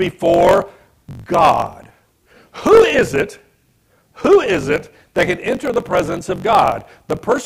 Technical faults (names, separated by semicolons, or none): block size mismatch (truncated)